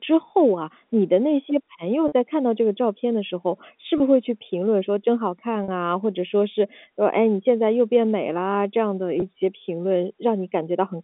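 Packet loss with pitch repetition occurs at 2.08 s (40 ms), 3.98 s (20 ms), 5.64 s (40 ms) and 9.20 s (20 ms), gaps that fit one or two lost 20 ms packets. The receiver repeats the last pitch period to fill each gap, so the speech briefly holds on a slightly buzzy, sustained tone before resuming, heard through the narrow telephone band of the G.711 line.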